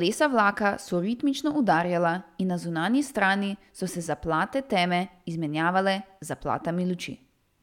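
No technical faults are audible.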